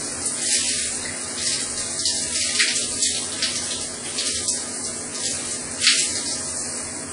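Throughout the clip, the sound is dulled, with nothing above 10.7 kHz, and carries a smeared, layered graininess. This points to transcoding between lossy codecs, likely a low-rate WMA encode re-encoded as HE-AAC, with the second codec spending bits on the first's artefacts.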